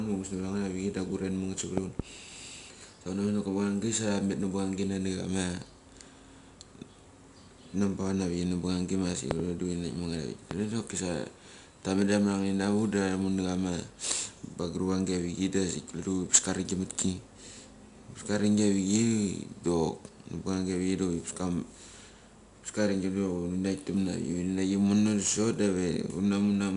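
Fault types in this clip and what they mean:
4-bit ADPCM compression: Each sample is stored as a coarse 4-bit step from a prediction. This leaves a gritty hiss that follows every louder stretch of speech. Nothing remains above 10.6 kHz, which points to a sample rate near 22 kHz.
loud pop: Sharp pops land on top of the speech, which carries on underneath. A pair falls at 1.78 to 2.02 s, another pair at 9.31 to 9.42 s, and one at 10.51 s. They stand well above the speech, likely from a sudden voltage spike.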